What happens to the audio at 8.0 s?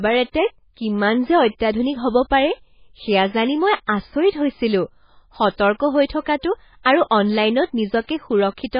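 At 8.0 s the speech carries the same heavy MP3 compression artefacts heard across the whole clip. Nothing survives above 5 kHz, and starved spectral lines flicker between frames, giving a watery, swirly texture with smeared consonants. This likely points to a very low bitrate, around 16 kbps.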